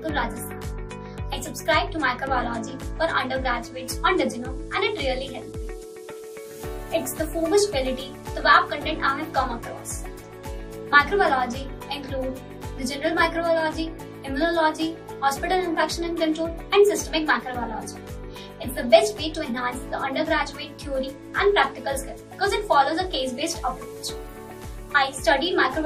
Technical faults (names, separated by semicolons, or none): none